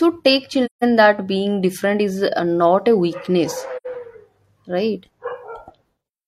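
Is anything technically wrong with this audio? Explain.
Yes. The speech has two short dropouts from AAC frame loss with muting. The first runs from 0.65 to 0.84 s, just before "that being different is". The second runs from 3.76 to 3.87 s, just after "uh not a weakness". In each, the decoder zeroed the missing frames' spectrum. The overlapping windows then faded the sound out and back in. The result is a soft-edged silent gap, about 170 ms and 85 ms long.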